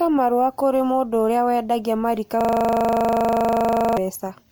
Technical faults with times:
0.00-4.52 generation loss
2.41-3.97 system hang loop

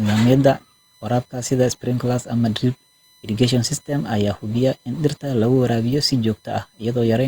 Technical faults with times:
0.00-7.27 USB whine

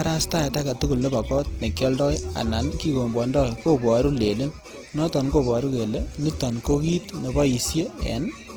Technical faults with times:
0.00-8.57 Opus compression

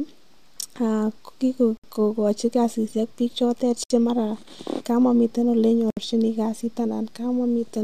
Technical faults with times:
1.77-1.84 gap at a join of encoded pieces
3.84-3.90 gap at a join of encoded pieces
5.90-5.97 gap at a join of encoded pieces

